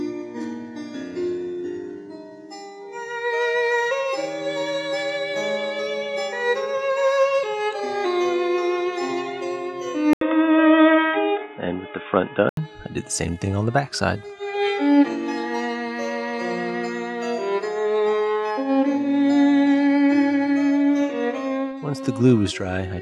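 At 10.13 s the sound drops out for about 80 ms, then returns dull and boxy, with nothing above 3.7 kHz, a modest level shift and a faint new noise floor, until 12.57 s. The likely cause is the input switching to a poorer device.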